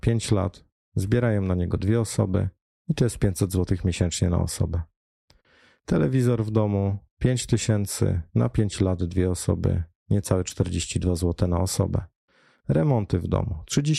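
A speech recording, with no technical fault to be heard anywhere in it. Nothing in the audio calls for a timestamp or a cause.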